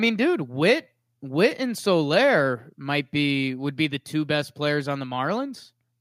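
Nothing in this recording jumps out as a technical fault, so there's really nothing to walk through here.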